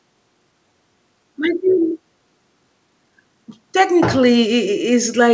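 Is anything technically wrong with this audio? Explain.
No, nothing is technically wrong with this audio.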